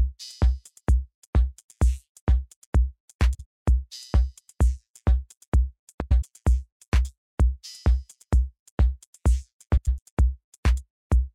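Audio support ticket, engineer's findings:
Frames out of order at 3.34–3.45 s, 6.00–6.23 s and 9.77–9.99 s: brief garbled flutter. Two adjacent blocks, about 52 ms each at 3.34 s and 105 ms each later, play swapped. This points to reordering in the packet/jitter stage. No audio is lost.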